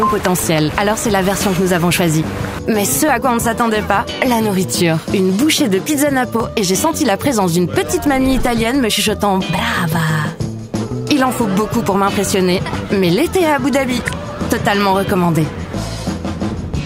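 Mismatched device clocks, likely a few hundred ppm apart, force clock drift buffer slips: small sample blocks drop or repeat, clicking every 1.11 s from 0.87 to 16.35 s.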